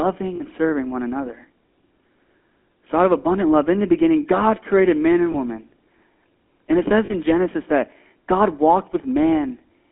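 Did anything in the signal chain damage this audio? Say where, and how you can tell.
Yes. The damage is in the codec stage. Throughout, the speech has the buzzy, gravelly roughness of the GSM full-rate codec, which fits the 13 kbps full-rate coder. It models the vocal tract and rebuilds the excitation from sparse, regularly spaced pulses. A spectrogram shows a hard band limit, with energy confined to roughly 250 Hz to 3.4 kHz and nothing above. Harmonics look smeared and grainy rather than cleanly striated.

The lost GSM frames point to the network stage. Three brief metallic rings appear at 0.36–0.42 s, 5.32–5.37 s and 7.06–7.14 s, fitting 40 ms, 20 ms and 40 ms of missing frames. The decoder repeats the last good frame's parameters, so the sound freezes into a rough, tonal hold. On a spectrogram these show as short horizontal smears of static harmonics. The waveform shows a brief, steadily repeating pattern instead of normal speech movement.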